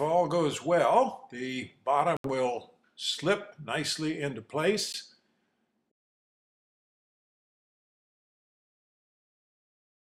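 At 2.17 to 2.27 s and 4.93 to 4.95 s, the sound cuts to silence, then resumes as if it had kept playing. These gaps are likely a Bluetooth dropout, with late packets discarded.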